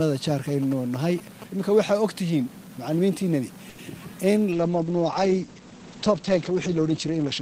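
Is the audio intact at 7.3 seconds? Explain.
No. At 7.3 seconds the audio is inside a call bitrate drop that begins at 4.52 s and runs to the end. The call's bandwidth estimate fell, so the encoder dropped from 32 to 10 kbps and narrowed its audio band from 20 kHz to 8 kHz. The sound turns muffled, coarse and watery. Unlike packet loss, the audio doesn't break up or go silent. Unlike a plain low-pass filter, the grainy coding texture sets in along with the muffling.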